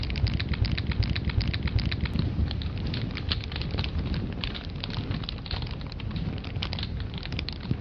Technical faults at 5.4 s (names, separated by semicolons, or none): none